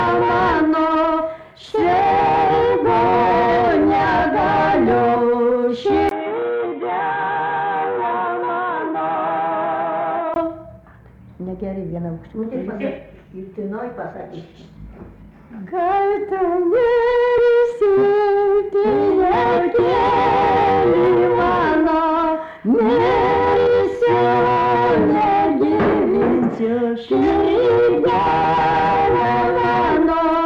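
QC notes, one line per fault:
6.09–10.36 s, input switched to a poorer device: a 20 ms gap at 6.09 s, then the sound turns dull and boxy, with nothing above 3.9 kHz. Level falls by roughly 5 dB, and faint background noise appears well beneath the signal. Full bandwidth, the earlier level and the quieter background all return at 10.36 s. The cause is likely a mid-recording handover to a narrower-band microphone or headset call profile and back.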